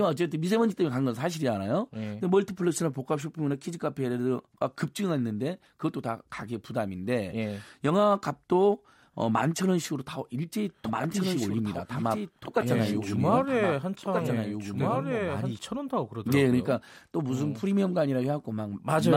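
From 10.85 s to 15.59 s a doubled audio track appears: a second, full-band copy of the speech trails about one and a half seconds behind, roughly 5 dB quieter, most likely from an edit that left two copies out of step. Unlike echo, it carries no decay or room colour and starts and stops abruptly.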